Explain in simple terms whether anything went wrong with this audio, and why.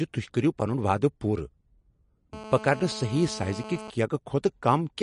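Two things went wrong. First, the speech was likely squeezed too hard by MP3 compression. To save space, everything above 10.6 kHz is cut away, so the speech sounds dull, and faint details flicker in and out, giving a watery, swirly quality.

Second, from 2.33 to 3.90 s there is GSM phone buzz. A mobile phone on a call nearby was sending radio pulses 217 times a second, and the audio equipment picked them up, adding a hard, raspy, steady buzz underneath the speech.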